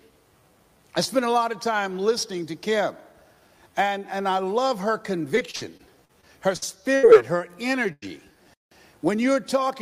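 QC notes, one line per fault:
5.35–7.15 s, repeated packet loss (robotic sound): The audio turns choppy, with eight short holes, the longest 73 ms, patched one after another so that about 17% of this stretch is filled-in sound. Each time packets failed to arrive in time, the receiver stretched the last bit of audio to cover the hole. Those patches total 295 ms while 320 ms of the real audio is skipped, so pieces drop out and the stretch sounds robotic.
7.93–8.04 s, burst of packet loss: The sound stalls into a sustained continuation of what came just before and fades over 93 ms, then picks up again further along. After a voiced sound that continuation is a held buzz, after other sounds a fading hiss. A run of packets was lost or arrived too late to play, and the receiver repeated the last audio while turning it down. About 100 ms of the original is missing, so the audio resumes slightly ahead of where it broke off.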